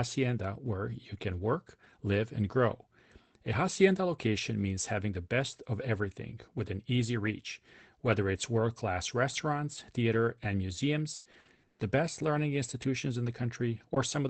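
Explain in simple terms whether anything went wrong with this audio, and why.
Something did go wrong, from 11.15 to 11.81 s, right after "class restaurants theater and". That stretch has repeated packet loss (robotic sound). The call connection dropped or delayed chunks of audio five times in quick succession, the longest gap lasting 120 ms. Each hole was patched by stretching out the sound just before it, so more than half of this short span is filled-in guesswork. That is why it comes out choppy and mechanical, with bits missing.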